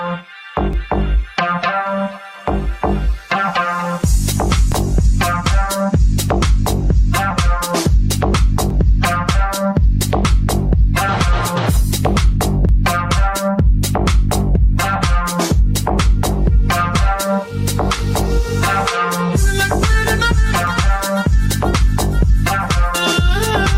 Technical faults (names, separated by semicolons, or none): overlap between stream segments